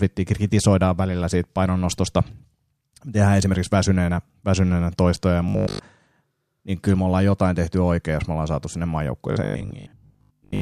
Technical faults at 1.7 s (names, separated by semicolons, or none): none